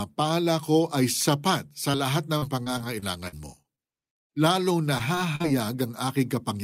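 Just after "ko ay sapat", at 1.91 to 1.96 s, short concealed packet loss occurs. About 20 ms of audio never arrived, and the decoder patched it, leaving a brief smear. Repeated packet loss, with its robotic sound, runs from 2.38 to 4.48 s. Ten gaps, the longest 42 ms, were each filled by extending earlier sound. The speech turns choppy. It returns at 4.98 to 5.46 s, with four gaps up to 43 ms, and the same robotic chop.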